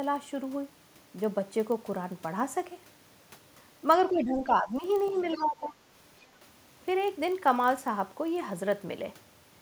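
A filter restarted on every block runs through the whole clip. Each block starts from silence, so a small tick opens it. The ticks repeat 25 times a second, which fits 40 ms blocks. They form a low buzz that rises and falls with the speech level.

From 4.1 to 4.84 s, the speech dips by roughly 10 dB. About half a second of it is affected. This is speech suppressed in double talk. The echo canceller likely heard both sides at once and turned everything down.

From 5.05 to 5.44 s, a faint second voice sits under the speech, far quieter than the talker. This is the other side's voice leaking through. The canceller likely left some of the loudspeaker sound in the microphone signal.

From 5.11 to 5.75 s, the speech is suppressed in double talk again. It drops by roughly 10 dB across a few tenths of a second. This overlaps the leak, which suggests the canceller likely treated the talker's overlapping speech as echo.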